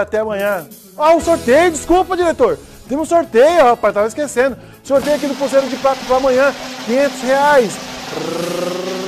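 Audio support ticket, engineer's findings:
No faults found on listening. Nothing audible points to a problem in capture, processing or playback.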